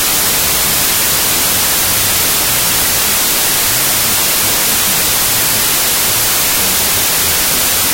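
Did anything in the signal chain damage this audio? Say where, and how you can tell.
Yes: a wrong sample width at sample-format conversion. Throughout, loud noise buries the sound at half speed and lower pitch, fitting 32-bit integer data read as 16-bit.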